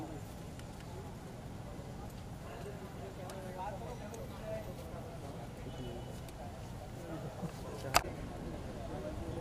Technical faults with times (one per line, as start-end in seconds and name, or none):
none